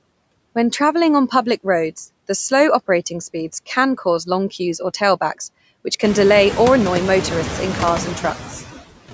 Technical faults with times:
0.00-9.14 noise suppressor artifacts

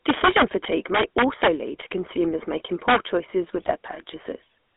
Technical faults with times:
0.00-4.77 GSM full-rate codec
0.06-1.81 integer overflow
2.88-2.96 integer overflow
3.57-3.71 GSM bit errors

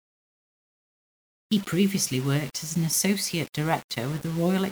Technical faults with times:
0.00-4.72 low bit depth without dither

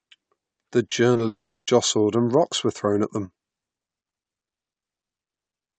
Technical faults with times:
0.89-1.21 short concealed packet loss
1.27-1.69 long network dropout
3.25-5.79 one channel drops out

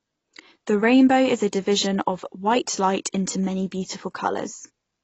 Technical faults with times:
0.00-5.03 AAC compression

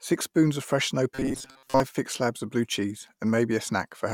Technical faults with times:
1.15-1.80 robotic sound from repeated short buffers

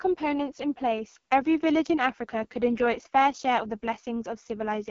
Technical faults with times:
0.00-4.90 AMR wideband (HD Voice) codec

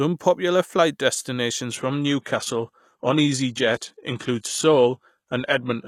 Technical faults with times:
1.71-5.87 adaptive stream at a lower bitrate

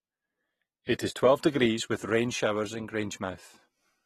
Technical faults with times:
0.00-4.05 AAC compression

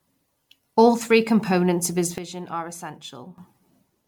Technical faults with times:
0.00-4.08 generation loss
2.18-3.38 sudden gain jump

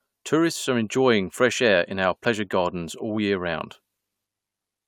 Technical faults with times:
none

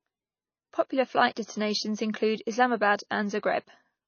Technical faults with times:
0.00-4.08 MP3 compression

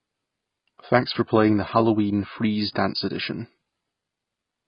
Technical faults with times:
0.00-4.67 AAC compression

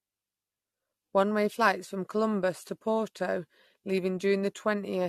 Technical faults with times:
0.00-5.09 generation loss

